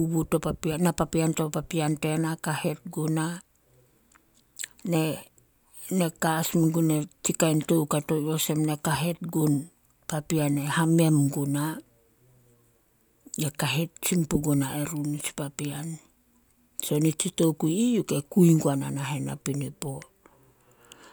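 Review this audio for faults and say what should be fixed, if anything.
No faults; nothing needs fixing.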